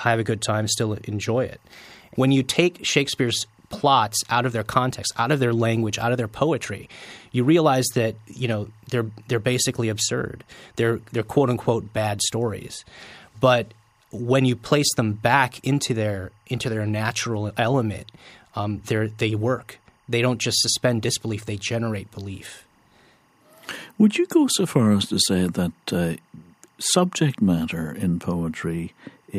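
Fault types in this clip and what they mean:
timecode bleed: linear timecode at 24 frames per second leaking in, a faint chirping warble around 1 and 2 kHz, roughly 40 dB down; spectrogram shows steady twin horizontal lines.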